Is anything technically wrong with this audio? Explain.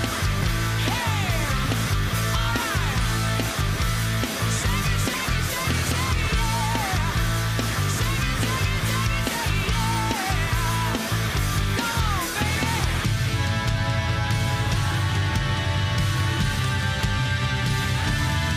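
No, nothing technically wrong turns up anywhere in this audio.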